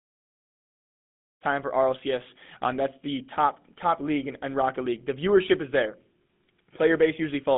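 The speech carries GSM full-rate codec damage from start to finish. The excitation is coarsely pulsed, giving a plainly buzzy, gravelly roughness, which fits 13 kbps GSM. The band runs about 200 Hz to 3.6 kHz, with nothing above 3.8 kHz. The clean fade-in ending near 1.46 s shares this roughness.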